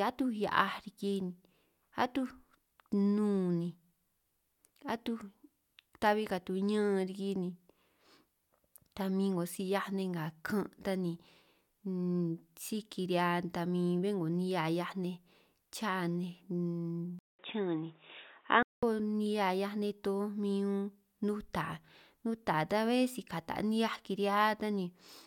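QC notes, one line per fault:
17.19 to 18.83 s, input switched to a poorer device. A 200 ms silence comes first. The speech turns dull and boxy, with nothing above 3.8 kHz. A faint new noise floor appears, but the level holds. Likely cause: a narrower-band input device.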